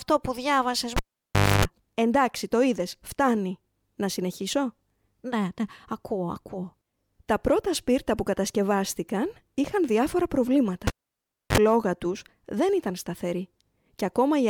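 Cable pulled and plugged in at 0.96–1.65 s after "που διάβασες" and 10.87–11.58 s after "είχαν διάφορα": pops, near-flat waveform, then 50 Hz hum stripes as the plug reseats.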